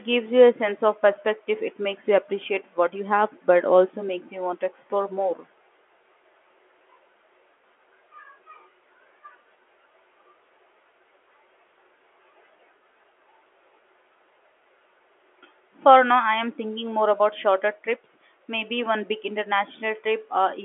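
Nothing goes wrong anywhere in this one; it's just ordinary speech over a G.711 telephone line, with the usual narrow band of roughly 250 Hz to 3.4 kHz and nothing above about 3.7 kHz.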